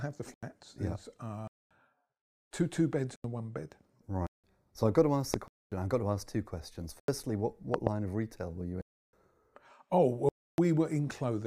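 The speech drops abruptly into dead silence and back at 0.34, 1.47, 3.16 and 4.27 s. These holes last 85, 232, 85 and 171 ms. They are blocks of digital silence, where samples were zeroed, most likely because the output buffer wasn't filled in time. The 85 ms gaps fit a 4096-sample buffer.

At 5.34 s a sharp loud pop, about 15 dB above the speech, lands on top of the sound, which carries on underneath. It is likely a voltage spike from a plug, switch, static or driver glitch.

Silence blocks return at 5.48 s (238 ms) and 7.00 s (85 ms). Between 7.74 and 7.89 s a double loud pop, about 20 dB over the speech, is heard, with the same likely cause. The last two holes, at 8.81 s (316 ms) and 10.29 s (293 ms), are the longest.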